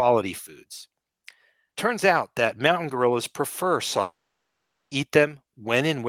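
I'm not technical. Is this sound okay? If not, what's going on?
No. Most likely, the audio stream stopped arriving for almost a second, a long network dropout, and that part of the recording never reached the listener. Right after "that mountain gorillas prefer", at 4.01 s, the last sound smears into a brief fading buzz, then goes to near silence for most of the gap. The speech resumes at 4.93 s, but roughly 0.9 seconds of what was said is simply gone.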